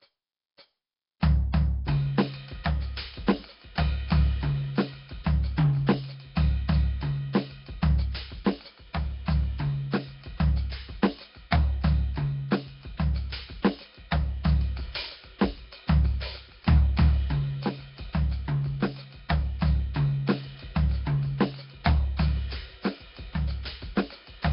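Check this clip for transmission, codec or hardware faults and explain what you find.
Nellymoser compression runs throughout this music clip, most likely from the old Flash Asao codec at a low rate. The codec spends a fixed, tiny bit budget on short blocks, so weak bands are replaced with noise. The result is a rough, hissy, smeared sound with heavy damage, and nothing above 5.3 kHz.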